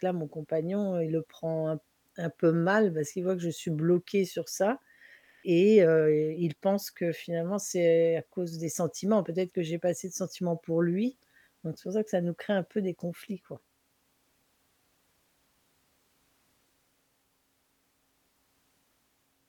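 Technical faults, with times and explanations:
Nothing technical stands out in this speech recording; there's nothing to flag at any point.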